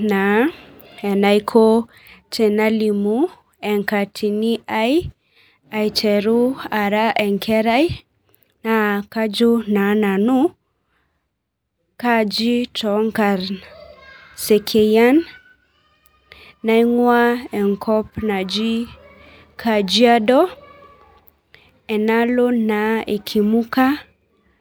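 Nothing in the recording stood out as a technical problem on listening.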